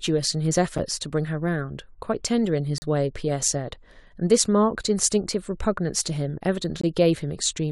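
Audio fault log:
0.78 s, 2.78–2.82 s and 6.81–6.84 s, gap between stream segments: the speech drops out three times into brief, hard-edged silences of about 7 ms, 38 ms and 21 ms, with the sound resuming cleanly afterwards. The holes fall on a 2-second grid, matching the boundaries between stream segments. At these points a segment's timestamps leave a small gap after the previous segment, and the player fills it with silence. This adds time to the stream but removes no audio.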